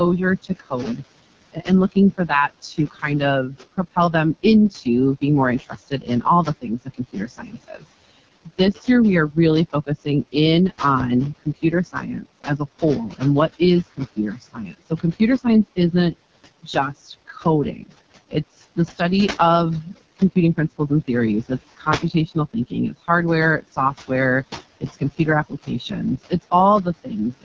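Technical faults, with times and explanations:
Throughout, noise suppressor artifacts: the suppressor is pulling the room noise down by about 21 dB whenever it decides a band is just steady background, so the hiss drops away in the gaps and comes back up underneath the talking.
Throughout, AMR wideband (HD Voice) codec: this is AMR-WB running at its lowest rate, 6.6 kbit/s, and you can hear it. The codec models the voice only up to about 6.4 kHz and pads the band above that with shaped noise, so nothing real sits up there and the content stops around 7.3 kHz. At this bitrate the excitation model is badly starved, which is why the speech comes out rough and raspy rather than clean.
0.43–10.8 s, 11.39–19.0 s, 19.84–23.08 s, 23.62–24.1 s, 24.8–27.45 s, speech cut by the noise suppressor: in each of these stretches the suppressor mistakes parts of the speech for background and turns them down with it. 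The deepest dips reach about 21, 22, 19, 13 and 20 dB. It's heaviest in the first run, where about three seconds in total get hit, and in the second, with about two seconds. The later ones are brief, from a tenth of a second to half a second in all. Soft consonants and word tails end up swallowed or faint, because their low-level energy looks just like the steady noise floor to the suppressor.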